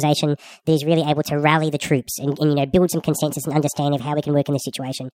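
Speech plays throughout at the wrong sample rate, 1.5 times too fast and about 7 semitones high, which fits 32 kHz audio played at 48 kHz. On a spectrogram, harmonics and formants sit 1.5 times higher; the waveform's syllables look squeezed in time.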